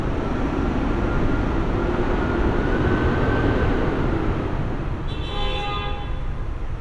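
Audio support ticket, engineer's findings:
Checked the whole recording and nothing stood out, so no faults to log on this ticket.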